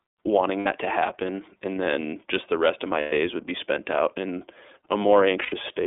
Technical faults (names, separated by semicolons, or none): iLBC codec; lost iLBC frames